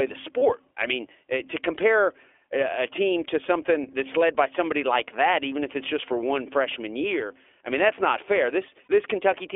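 From the start the speech runs through the iLBC codec, squeezed into a telephone band of roughly 300 Hz to 3.5 kHz. Each short frame is coded on its own, which fits the 20 ms mode at a rate near 15 kbps, leaving the voice plainly rough and a bit synthetic.

At 0.38 s, just before "I mean to compare", and again at 8.84 s, right after "mean that's not fair", there are lost iLBC frames. Each gap lasts about 40 ms, which matches two dropped frames. The decoder fills the hole by repeating the last pitch cycle with some noise mixed in, so you hear a brief buzzy held vowel before the voice snaps straight back.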